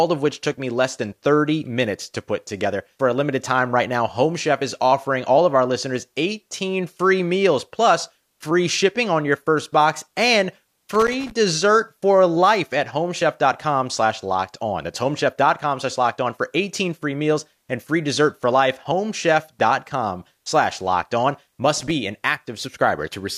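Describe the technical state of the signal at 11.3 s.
At 11.3 s you're right at the tail of a burst of loose connector crackle that runs from about 10.94 to 11.31 s. A worn or dirty contact keeps making and breaking, chopping the speech into that ragged, irregular scratching.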